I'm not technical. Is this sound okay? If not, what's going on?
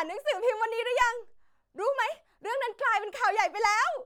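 Yes, nothing in this speech recording points to a technical fault.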